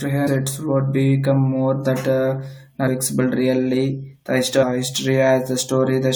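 Damaged data in a compressed stream shows up three times: at 0.26 to 0.28 s, just before "would become more that", then at 2.87 to 2.89 s and 4.62 to 4.64 s. Each time, a short run of the encoded speech arrives corrupted. The decoder misreads those frames, loses its place, and hunts for the next valid frame header before playback settles. Each event is a brief chirp, squawk, click or short hole of about 20 ms cutting through the speech.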